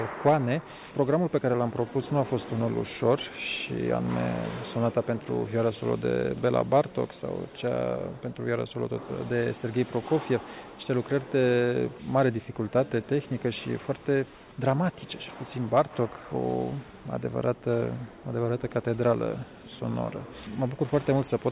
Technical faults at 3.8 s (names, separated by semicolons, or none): none